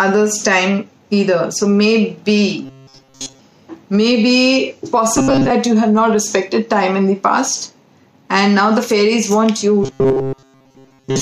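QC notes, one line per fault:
2.65–3.40 s, 5.17–5.51 s and 9.84 s to the end: robotic sound from repeated short buffers. The audio turns into a rigid metallic buzz locked at 134 Hz. That pitch fits a roughly 7.5 ms chunk being looped, likely because new audio was arriving too slowly and playback kept repeating the last bit. Most of each stretch, something like two-thirds or more, is repeated filler, so the real audio underneath gets skipped.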